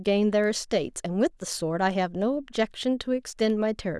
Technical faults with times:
0.44 bit error spike
3.50 bit error spike

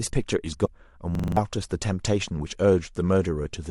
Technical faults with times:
0.64-0.68 broken MP3 bit reservoir
1.15-1.37 system hang loop

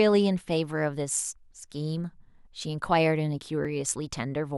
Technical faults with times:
3.65 overlap between stream segments

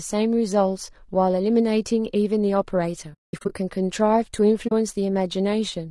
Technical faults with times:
0.00-5.90 low-delay AAC compression
3.13-3.53 AAC frame loss with muting
4.67-4.72 AAC frame loss with muting

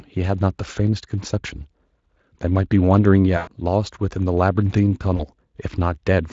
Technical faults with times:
3.37-3.49 VoIP packet loss concealed by the speech codec
5.17-5.24 VoIP packet loss concealed by the speech codec

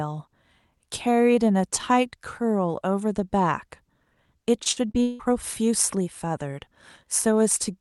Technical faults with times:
4.63-5.21 repeated packet loss (robotic sound)

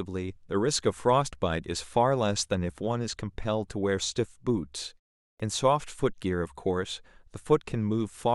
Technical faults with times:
5.32-5.40 clipped start after a pause

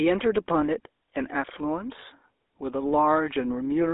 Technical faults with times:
0.00-3.93 GSM full-rate codec

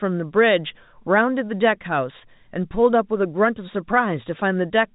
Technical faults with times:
none

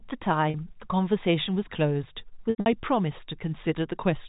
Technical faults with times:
0.50-0.54 packet loss with pitch repetition
2.50-2.66 packet loss with pitch repetition

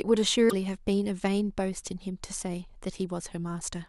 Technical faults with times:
0.48-0.53 broken MP3 bit reservoir

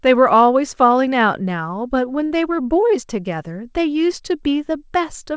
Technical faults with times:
2.26-2.32 short stall from a late packet

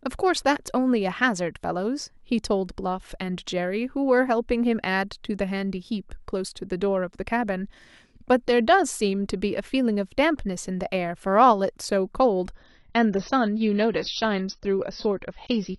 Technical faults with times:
12.55-15.79 adaptive stream at a lower bitrate

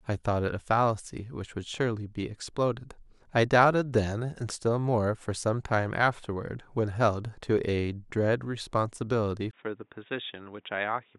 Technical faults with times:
9.51-11.19 input switched to a poorer device

